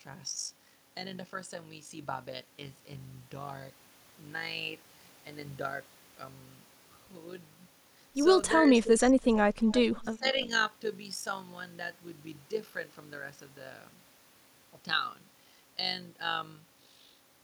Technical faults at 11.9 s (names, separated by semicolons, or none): overlap-add ripple